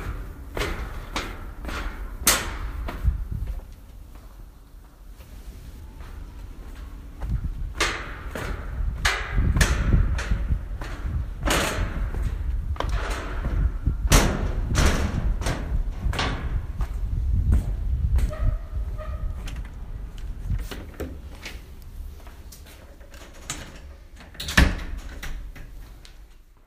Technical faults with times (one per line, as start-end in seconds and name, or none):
none